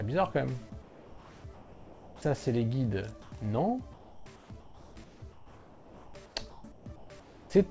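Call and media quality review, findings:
Comfort noise in place of the background at 0.82–2.22 s, 3.22–3.32 s and 3.94–7.50 s. Textured background drops out and becomes steady, featureless hiss, likely from discontinuous transmission with receiver-generated noise filling the gaps. Spectrogram: smooth, uniform noise floor with no fine detail, capped at 8 kHz like everything else, consistent with a wideband G.722 path. At 3.22 s the fill sits about 24 dB below loud passages with no level step. Waveform envelope looks steady.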